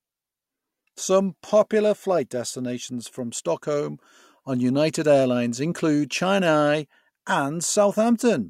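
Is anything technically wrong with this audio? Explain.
No, nothing is technically wrong with this audio.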